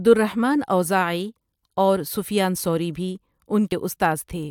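A speech recording with a single brief disturbance at 3.71 s, caused by damaged data in a compressed stream that made the decoder lose sync and resynchronise.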